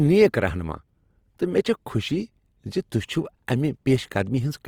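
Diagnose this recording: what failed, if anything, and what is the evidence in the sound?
The speech is rough and grainy throughout, fine detail turned to noisy fill. This points to the codec stage, likely Opus compression in CELT mode at about 24 kbps.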